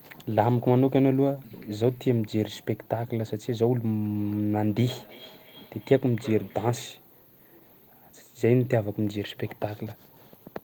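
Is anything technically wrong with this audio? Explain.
Yes. From 4.21 to 7.05 s the speech is followed by a faint repeat roughly every 300 ms, peaking at about 20 dB below the voice. This is feedback echo between two devices: a second device in the room replays the call, the microphone recaptures it, and the local echo canceller can't remove it.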